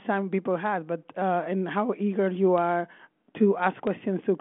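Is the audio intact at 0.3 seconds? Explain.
Yes, the audio is intact at 0.3 seconds.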